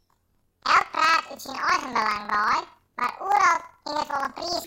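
From start to finish the speech sounds an octave too high, with a fast flutter riding on it at about 21.5 Hz, yet the overall pace stays normal. This is planar audio read as interleaved. Each block of roughly 46.4 ms, which fits a 2048-sample block, stores all left samples and then all right, but is read as alternating pairs, so every block plays twice at double speed, left then right.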